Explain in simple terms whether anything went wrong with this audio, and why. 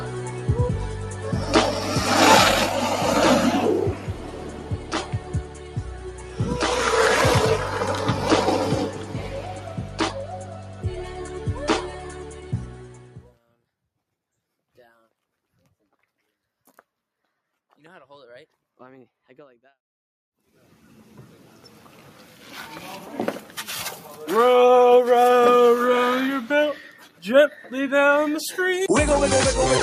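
A noise suppressor meant for voices was left running on this sound. That is the noise suppressor applied to music or sounds. It mistakes steady tones, room ambience and echo for background noise and turns them down. Sudden hits get through, but anything held or fading sinks. So the level keeps rising and falling through the whole clip, and the sound seems to pump and thin out.

In several places the sound was cut by the noise suppressor more than elsewhere. This happens at 0.00 to 0.55 s, 0.72 to 1.51 s, 3.88 to 6.39 s, 8.89 to 10.00 s, 10.16 to 11.62 s, 11.88 to 13.38 s, and briefly near 27.1 s. In these spots the steadier parts drop away noticeably. Fading tails end too soon. Sharper sounds in the same stretches come through much better.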